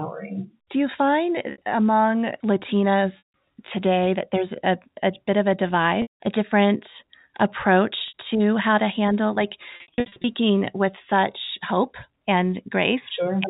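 At 1.52 and 8.08 s the speech briefly sounds held and buzzy for about 60 ms. At 3.18 to 3.33 s and 6.02 to 6.20 s, that buzz fades into silence before the speech cross-fades back. From 9.76 to 10.24 s several short buzzy stutters are scattered through the speech, none longer than 60 ms. This is packet loss with pitch repetition: the receiver repeated the last pitch period to cover each gap and faded it out on the longer ones. The speech is band-limited by G.711 telephone coding, which leaves nothing above 4 kHz.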